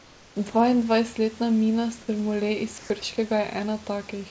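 From 0.00 to 0.36 s the sender has likely stopped transmitting during a pause, so the receiver plays comfort noise in place of the background. The room noise, which sits about 27 dB below the loudest speech, becomes a smooth, featureless hiss about 4 dB quieter than the real background that follows. A second stretch of comfort noise in place of the background runs from 2.78 to 2.90 s. This time the level stays the same, and only the texture goes flat and steady.

Between 0.50 and 0.54 s, sound is dropped by the voice detector. The detector likely judged 40 ms of sound to be background and halted transmission, and synthetic noise fills the gap. The sound briefly gives way to comfort noise and returns as soon as the detector triggers again. Throughout, the G.722 call path at 64 kbps leaves nothing above 8 kHz.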